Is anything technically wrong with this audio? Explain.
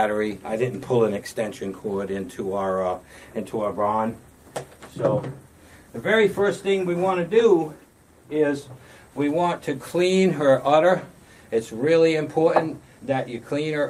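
No, there are no technical faults to hear anywhere in this audio, and the signal stays intact and steady throughout.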